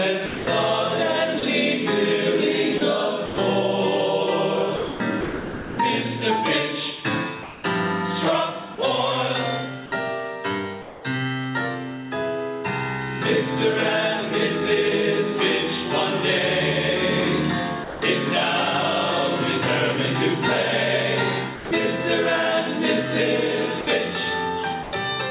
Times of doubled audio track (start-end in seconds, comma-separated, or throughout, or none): none